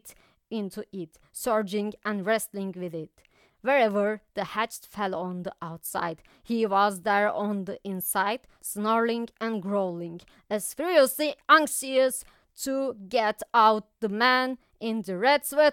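No faults can be heard anywhere in this speech recording.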